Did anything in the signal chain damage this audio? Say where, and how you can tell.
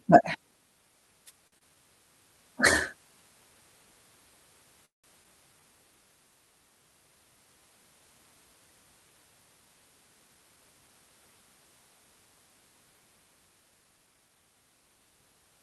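Yes. From 1.25 to 1.32 s there is a short burst of static. That is a wireless microphone noise hit at the radio stage: the analogue FM link faded as reflections cancelled, and the receiver's own noise rose through the signal for about 60 ms.

At 1.47 to 1.54 s a sound is held too long, stretched by 48 ms. This is a short stall from a late packet on the network. The jitter buffer ran empty, and playback resumed from the same point once the packet arrived.

Just after, from 1.58 to 1.76 s, comes a brief smear. That is short concealed packet loss: about 40 ms never reached the decoder. The receiver bridged the hole with 25 ms of continued sound extrapolated from what preceded it, then blended back into the real audio.

From 4.85 to 5.06 s the sound holds, fades and then drops to silence for 160 ms before carrying on where it stopped. This call audio freeze put a 183 ms gap into the audio. The likely cause is packets held up in transit, draining the jitter buffer.

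At 5.24 to 5.26 s playback jumps forward with almost no gap, and roughly 70 ms of audio is gone. This is a skip ahead: a stretch of audio was dropped while later audio was already queued, and the two sides of the cut were butted together.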